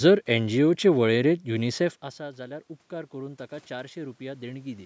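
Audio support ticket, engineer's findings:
Automatic gain rising, 1.51 to 4.81 s: voice and room noise swell together. Talker drops back around 2 s, input falls about 17 dB, and the AGC in the call mic chain slowly claws back about 6 dB. Not a full recovery, so the level stays down.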